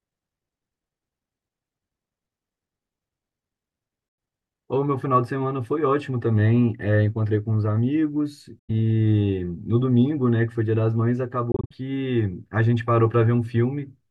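At 4.09 to 4.18 s and 8.59 to 8.70 s the speech cuts to silence for about 93 ms each. At 11.52 to 11.73 s about 116 ms vanishes in short holes spread over roughly 186 ms, the longest about 46 ms. This is likely a Bluetooth dropout: late packets were discarded. Unlike a stall that resumes where it stopped, the speech returns further on, as though it had kept playing through the gap.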